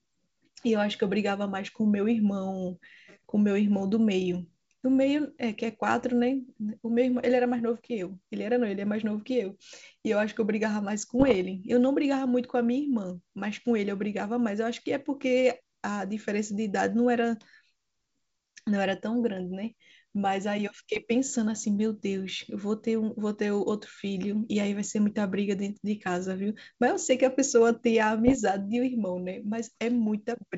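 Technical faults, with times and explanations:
11.19–11.42 s, 20.96–20.99 s and 28.27–28.36 s: bit errors on an ADPCM link. The wideband G.722 speech, whose sound fits the 64 kbit/s mode, breaks into pops and rough, gritty bursts with brief jumps in level. These sound like bit errors at a rate of around half a percent, rising to about 0.7 percent in the last burst. Each corrupted code misleads the decoder's step size and predictor, so the damage lingers for some milliseconds instead of staying a single click.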